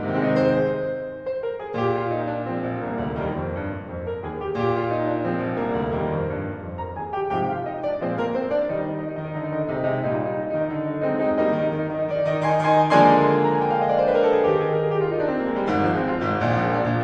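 No technical faults can be heard anywhere in this music clip. There is no moment in it that needs a time mark.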